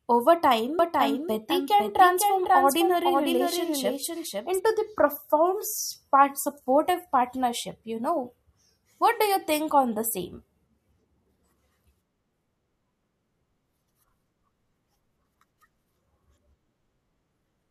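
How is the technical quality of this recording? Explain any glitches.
The recording has one glitch, a doubled audio track, from 0.79 s to 4.59 s. During that stretch the speech is heard twice. A second copy trails the original by about half a second, a few decibels quieter. It carries no reverb or room colour, and it begins and ends abruptly. The likely cause is the same signal reaching the mix a second time through a slower path, or two out-of-step copies left in an edit.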